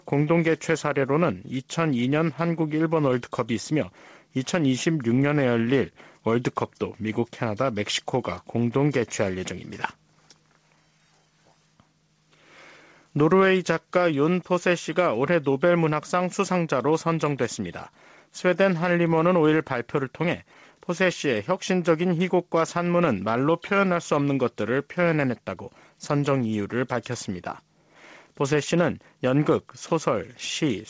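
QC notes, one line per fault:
Throughout, gain pumping: the gain swings by roughly 5 dB. Loud and soft parts sit close together. The likely cause is gain set too high, with a fast limiter pulling it back down.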